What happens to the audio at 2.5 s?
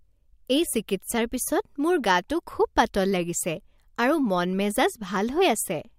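Nothing goes wrong at 2.5 s; the speech plays through that moment intact, with no dropout, click or other fault.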